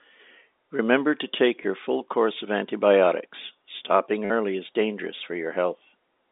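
A tiny blip at 1.63 s, then a brief robotic stutter from 4.25 to 4.30 s, is packet loss with the last packet repeated. The 50 ms gap buzzes at about 100 Hz, fitting 10 ms packets.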